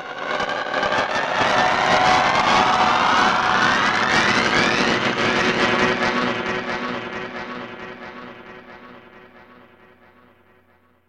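No technical faults are audible.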